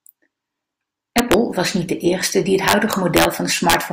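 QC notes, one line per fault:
1.18 to 1.34 s, integer overflow: loud speech peaks pushed about 2 dB past the integer ceiling wrap to the opposite sign instead of clipping, giving sharp cracks.
2.68 to 3.25 s, integer overflow: a longer run, overdriven by about 3 dB, where each crest beyond full scale flips across the range, producing repeated violent snaps harsher than clipping.
3.70 to 3.74 s, integer overflow: a brief burst, about 3 dB over, causing abrupt cracking on its peaks.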